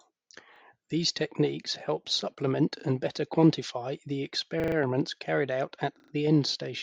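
At 0.56 s, 2.8 s (between "techniques help supplement" and "and better quantify the"), 4.6 s (after "and better quantify the") and 6.0 s (after "carried out at"), the speech stutters. This is a repeated buffer: new data arrived late, so the device replayed its last 40 ms block, once at the first two points, four times at 4.6 s and three times at 6.0 s. The waveform shows identical 40 ms copies butted together, and the spectrogram shows vertical lines at each hard join.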